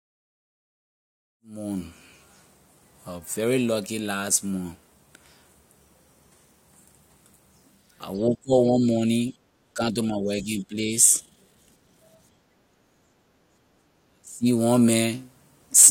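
After the smooth fade-in that settles near 2.0 s, the speech dips from 8.18 to 9.08 s, by roughly 15 dB at its deepest. This is likely speech suppressed in double talk: the echo canceller, facing both sides talking at once, turned the near talker down along with the echo. At 9.38 to 9.44 s the room sound drops by about 11 dB, which is background gated by the echo canceller as it clamps the microphone during loudspeaker playback. The speech suppression returns from 9.74 to 10.92 s at around 10 dB down. The background gating returns from 12.4 to 13.82 s at about 8 dB before the canceller lets go. The speech suppression comes back a final time from 14.1 to 14.46 s, nearly cutting the speech out at roughly 30 dB down.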